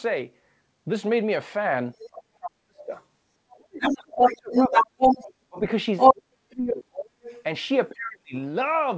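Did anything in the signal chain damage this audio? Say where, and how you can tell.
Yes. Other side's voice leaking through is audible at 1.96–2.09 s, 2.81–5.33 s, 5.98–6.14 s and 7.23–7.43 s, at the call-processing stage. The brief scraps sit well under the talker, the longest stretch runs slightly above the speech, and the 5.98 s burst rises above it. This is likely a loudspeaker echo the canceller failed to subtract from the microphone feed.

Speech suppressed in double talk shows as the talker's level collapsing by up to about 40 dB at 2.09–2.92 s, 3.52–4.79 s, 5.49–7.18 s and 7.90–8.34 s. These are deep dropouts of about 35 to 40 dB rather than gentle dips. The mechanism is likely the echo canceller's suppressor, unable to separate near speech from echo, attenuating everything during overlap.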